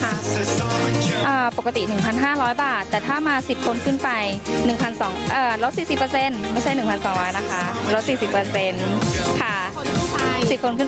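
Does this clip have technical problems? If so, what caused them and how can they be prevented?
Yes, there's gain pumping running through the whole clip. The level keeps getting yanked down whenever something loud comes in and then climbs back up in the gaps, a swing of around 15 dB, so loud and soft moments sit squashed close together. That's likely the mic input gain set way too high, with a fast limiter or compressor clamping down on every loud hit. The top end also stops around 8 kHz, which is just the call path's bandwidth. To prevent it, turn the mic gain down until loud passages stay clear of the limiter.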